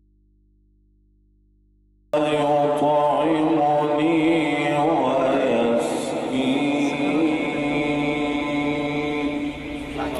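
The audio opens in an audio dropout to a faint residue that is already under way when the clip begins and lasts until 2.14 s. For that stretch the wanted signal is absent and only a low mains hum remains, roughly 40 dB below the normal signal level. At 2.14 s the sound returns abruptly, with no fade. The likely cause is a break in the source feed while the downstream input stayed live and picked up hum.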